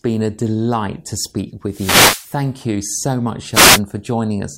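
Wireless microphone noise hits occur at 1.68–2.33 s, after "a delight to speak", and 3.52–3.80 s, after "you so much". Multipath cancellation fades the FM signal, so a swish of receiver static washes over the speech.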